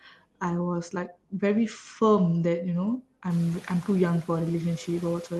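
A short speech recording opens with speech cut by the noise suppressor: from 0.05 to 0.22 s the suppressor mistakes the soft start of the speech for background and pulls it down by as much as about 15 dB, so around 150 ms sounds swallowed and faint. Unlike a packet-loss dropout, the sound never vanishes or glitches. It is smoothly attenuated along with the noise floor and recovers without a click or gap. The room noise that climbs by about 19 dB near 3.5 s still sits about 22 dB under the speech. The top end stops at 12 kHz, consistent with an Opus call stream at around 24 kbps.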